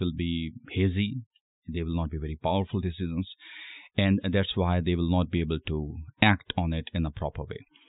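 Speech recording with no technical faults detected anywhere in the clip.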